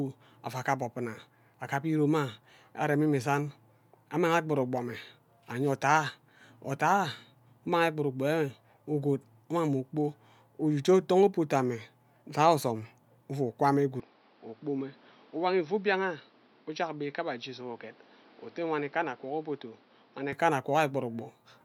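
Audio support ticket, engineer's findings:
Speech goes dull and boxy 14.00–20.33 s, nothing above 5.8 kHz, level down about 5 dB, new hiss roughly 30 dB under. Likely input switched to a poorer device; no gap at switch. Unlike a bandwidth-only filter, tone, level and noise floor all shift together.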